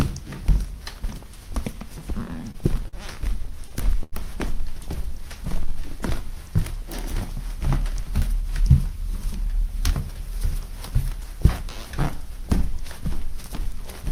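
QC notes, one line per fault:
2.27–2.95 s and 3.45–4.14 s, repeated stalls (stutter): the sound catches and drags in short hitches, four in the first stretch and five in the second, the longest about 46 ms and then 90 ms. Packets arrived late, so the jitter buffer ran dry repeatedly and the receiver extended the last sound to cover 93 ms and 135 ms of waiting, about 14% and 19% of each span. Nothing is lost; the timing stumbles.
4.95–5.94 s, jitter buffer slow-down: the sound stretches out at unchanged pitch, running at 94% speed with a drawn-out quality. The buffer was short of reserve, so the receiver repeated individual pitch periods or bits of pauses again and again, adding 66 ms in total to rebuild its cushion.
7.94–11.35 s, jitter buffer speed-up: the sound runs slightly faster at the same pitch, at 103% speed. The buffer had accumulated more delay than it targets, so the receiver trimmed away tiny slices of one or a few pitch periods repeatedly, shaving off roughly a tenth of a second across the span to pull latency back down.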